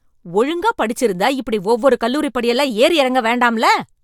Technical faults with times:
none

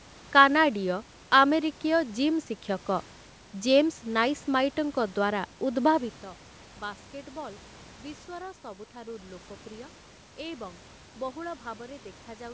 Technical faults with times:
none

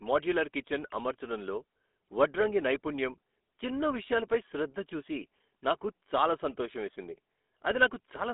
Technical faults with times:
0.00-8.34 GSM full-rate codec

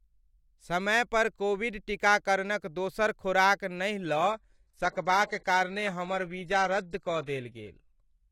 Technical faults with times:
4.09-8.31 adaptive stream at a lower bitrate

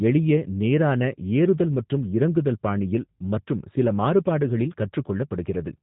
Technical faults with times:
0.00-5.82 G.729 codec

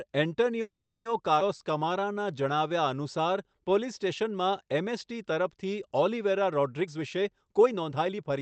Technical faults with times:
0.61-1.07 call audio freeze
1.39-1.42 skip ahead
1.63-2.69 jitter buffer slow-down
6.81-8.40 jitter buffer speed-up

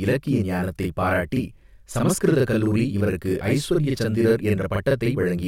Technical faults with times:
0.00-5.47 channel delay (doubling)

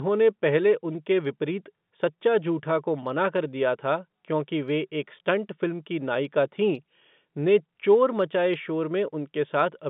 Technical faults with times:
none

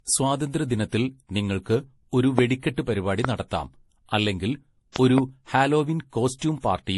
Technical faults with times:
0.00-6.97 transcoding between lossy codecs
2.39-2.41 loud pop
3.25-3.27 loud pop
4.96-5.20 loud pop

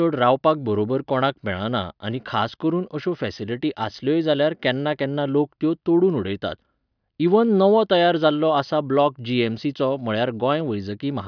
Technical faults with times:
none

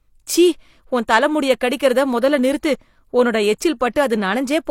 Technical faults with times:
3.93-3.96 pre-echo

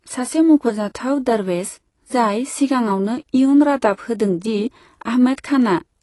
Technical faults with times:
0.00-6.03 AAC compression

